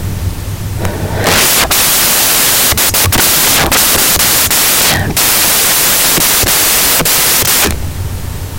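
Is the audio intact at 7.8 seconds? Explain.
No. At 7.8 seconds the speech carries loud, harsh broadband noise from samples built from the wrong bytes, present throughout: misassembled low-order bytes dominate each value.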